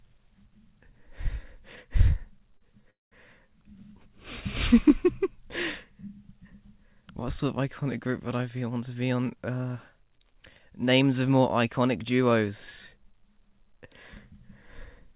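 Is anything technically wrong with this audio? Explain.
Yes, there are three faults, all in how the audio was delivered rather than recorded.

A short stall from a late packet occurs at 2.58 to 2.63 s. One packet arrived late, so the jitter buffer emptied and the receiver stretched the last bit of sound by 30 ms to cover the wait, then carried on from where it had stopped. Nothing is lost, but that moment is held unnaturally long, with a faint buzz or dip and a 30 ms added delay.

A call audio freeze follows at 2.90 to 3.14 s. The sound hangs, continuing briefly as a fading buzz before dropping to near silence for about 190 ms, then resumes exactly where it left off. The likely cause is packets held up in transit, starving the jitter buffer, which filled 213 ms with concealment. Nothing is missing, but the audio now runs 213 ms later than before.

A jitter buffer speed-up runs from 8.55 to 11.03 s. 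The buffer had built up more audio than it aims to hold, so the receiver trimmed many short pitch-period-sized slices in succession, about a fifth of a second in all. Pitch stays the same, but the sound plays at about 108% speed and feels hurried across that stretch.

Throughout, the call path's G.711 A-law coding leaves nothing above 4 kHz, which fits a 64 kbps telephone-band link.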